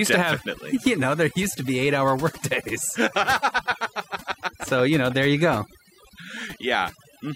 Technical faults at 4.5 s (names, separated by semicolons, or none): overdone noise removal